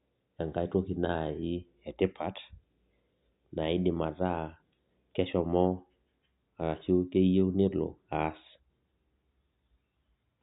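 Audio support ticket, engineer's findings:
No faults found on listening: the signal holds steady throughout, with no dropouts, discontinuities or level disturbances to trace to any component.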